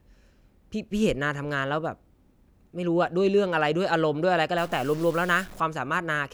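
From about 4.58 to 5.60 s the speech turns harsh and buzzy, and the gaps between sounds fill with a gritty noise floor. That's the signature of a stuck bit, likely one data line pinned high or low, offsetting samples by about -40 dBFS.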